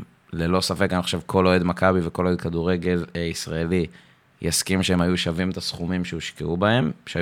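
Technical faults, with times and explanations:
No technical faults detected.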